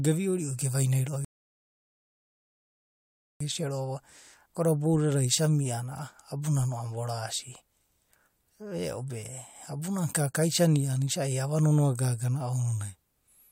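At 1.25 s the speech halts in a rebuffering stall, silent until 3.41 s; unlike a dropout, it resumes exactly where it stopped, adding 2.16 s without losing anything.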